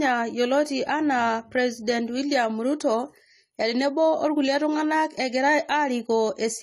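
Speech with AAC compression damage throughout: nothing above 14 kHz, dull, smeared detail and fizzy sibilants, likely from AAC-LC coding at a low bitrate around 32 kbps.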